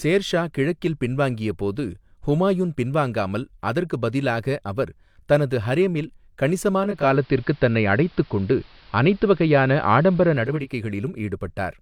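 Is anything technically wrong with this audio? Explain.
Yes. Digital radio blending to analogue, 6.77–10.76 s: the receiver lost the digital stream and cross-faded over 474 ms to AM, muffling the treble, shifting level about 5 dB and adding faint hiss, then blended back.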